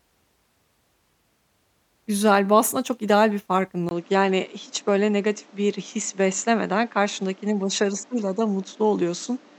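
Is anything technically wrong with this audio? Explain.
Yes. From 3.89 s to the end, the speech turns duller, with nothing above 7.9 kHz, after a 20 ms gap. A new background noise sits about 30 dB down while the level stays the same. The likely cause is the input switched to a poorer device. The gap and the fresh noise floor set it apart from a plain low-pass filter.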